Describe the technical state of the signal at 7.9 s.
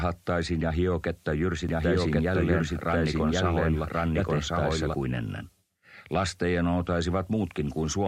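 At 7.9 s the signal is intact, with no audible dropout, distortion, glitch or other technical fault at that point.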